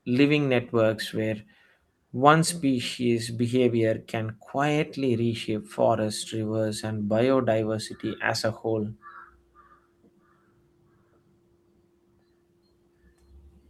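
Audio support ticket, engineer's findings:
No technical faults found on the speech signal: levels, continuity and timing hold steady across the whole recording with nothing to trace to any component.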